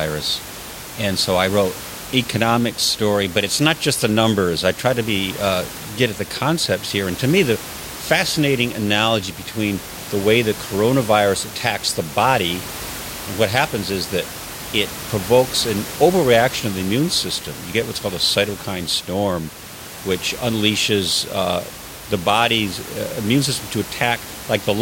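The clip is speech, and nothing is technically wrong with it.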